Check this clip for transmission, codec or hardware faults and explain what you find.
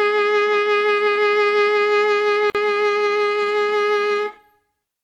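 The music has one codec-related fault: a gap at a join of encoded pieces at 2.50 s. The sound drops out for about 47 ms, until 2.55 s, then resumes where it left off. This happens when separately encoded sections are joined without trimming. The encoder's start-up delay and the padding of its final frame both remain as dead air. The edges of the dropout are softened by codec smearing.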